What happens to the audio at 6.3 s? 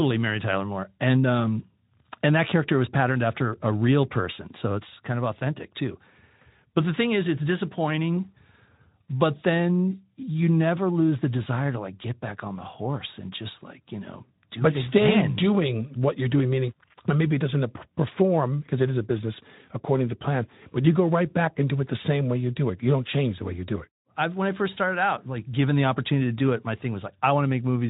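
Nothing goes wrong at 6.3 s: the speech passes through intact, with only the narrow, band-limited quality of the Speex codec it is carried on, which leaves nothing above about 3.8 kHz.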